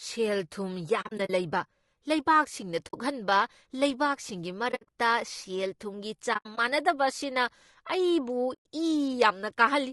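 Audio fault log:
throughout: low-delay AAC compression. The speech sounds plainly rough and grainy, with a hiss filling the gaps between the harmonics and a top band that sounds thin and synthetic. This is likely a low-delay AAC coder such as AAC-ELD, whose short frames resolve pitch harmonics poorly and spend bits inefficiently. At a rate that sounds like roughly 32 kbps, there aren't enough bits to code the harmonic detail cleanly.
1.01–1.30 s, 2.87–2.95 s, 4.71–4.89 s, 6.33–6.58 s, 8.53–8.66 s: AAC frame loss with muting. The sound drops into soft-edged silent holes. The decoder zeroes the spectrum of each missing frame, and the overlapping windows fade the audio out and back in. The first, third and fourth events are clusters of short gaps: about 140 ms lost over 280 ms, 120 ms over 160 ms, and 120 ms over 240 ms, with the longest gaps roughly 40 ms, 70 ms and 70 ms. At 2.87 s the single gap lasts 60 ms, and at 8.53 s it lasts 120 ms. 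The gap lengths fit frames of about 20 ms.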